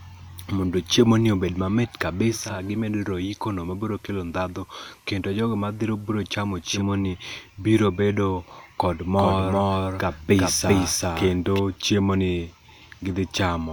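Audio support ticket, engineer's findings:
Digital radio blending to analogue, 2.25 to 7.01 s, starting just before "ni biro". Receiver loses digital and cross-fades to FM over 411 ms. Hiss about 35 dB below signal. Level drops about 3 dB. Blends back at 7.01 s.

Doubled audio track, 9.19 to 11.59 s. A full-band copy trails roughly 0.4 s behind at about equal level. No decay, no room colour. Starts and stops abruptly. Likely a second, slower capture path or an edit holding two offset copies.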